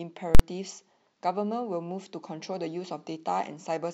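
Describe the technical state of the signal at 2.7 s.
At 2.7 s the speech signal is intact, with no audible technical fault.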